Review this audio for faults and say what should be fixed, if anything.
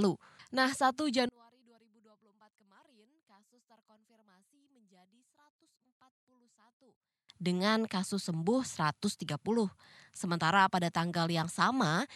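From 1.29 s to 7.29 s the speech nearly vanishes, dropping by about 37 dB and leaving only a faint residue. The likely cause is one channel inverted: with one side's polarity reversed, the centred speech cancels when the channels are summed to mono. Restore the polarity on that section and check for phase correlation and in mono before export.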